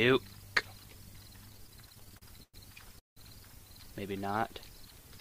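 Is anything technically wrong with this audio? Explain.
Yes, three.

Repeated stalls (stutter), 1.49 to 2.56 s: packets arrived late, so the buffer kept emptying and the receiver stretched the last sound. This adds about 0.3 s, with the longest hold at 109 ms, so the sound drags and stutters.

Call audio freeze, 2.99 to 3.19 s: a 176 ms gap opens, mostly silent for 160 ms, then the audio resumes where it stopped. It was likely caused by held-up packets draining the jitter buffer.

Jitter buffer slow-down, 4.13 to 4.59 s: repeated pitch periods add 76 ms to rebuild the buffer reserve, so the audio plays at 85% speed with unchanged pitch and sounds drawn out.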